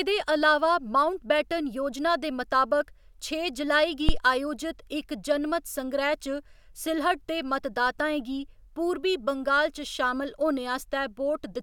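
At 4.09 s the speech gets hit by a phantom power thump, a deep low thud that's gone by about 4.22 s, with the tail dying away over roughly 30 ms. Someone switched the supply on a live input, and that voltage step punched straight through the coupling capacitors.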